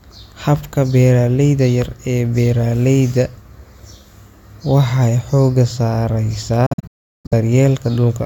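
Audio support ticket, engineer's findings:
Bluetooth dropout, 6.66–7.33 s. Speech cuts out in several gaps spread over 650 ms, about 530 ms missing in total, longest single hole about 370 ms. Speech resumes further along, as if it had played on. Likely cause: wireless link to headphones, with late packets discarded and output muted until valid data returned.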